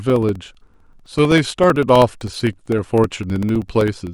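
From 0.10 s to 4.07 s, periodic USB or driver dropouts blank about 2 ms of the speech every 64 ms, roughly seventy times. Each gap is a stall that gets filled with silence. Their strict, even spacing, audible only under signal, separates these ticks from random clicks.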